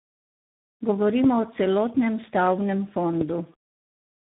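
Throughout, tandem speech coding leaves the speech rough, muffled and warbly, with nothing above 3.8 kHz. The damage is compounded in a way no single codec produces, which points to about three speech codecs in a row. At 1.24–1.26 s and again at 3.21–3.23 s, a single loud pop sits about 20 dB above the speech, which carries on underneath. The pops are single and sharp rather than a crackle or a dropout, and likely come from an electrical step such as a plug, switch or static discharge.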